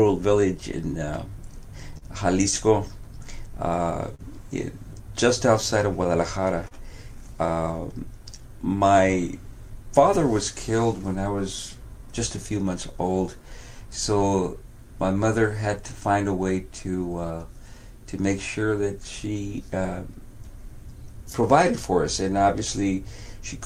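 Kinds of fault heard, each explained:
Clock drift between sender and receiver: the sender's clock runs roughly 3% slow, so the receiver's buffer keeps draining, causing small timing hiccups all through the sound.
Scattered short gaps: packets lost in three early clusters were patched by extending the last sound, leaving brief smears up to about 40 ms.
Repeated timing corrections: to match the slow sender, the receiver repeatedly lengthens short pieces, adding about half a second.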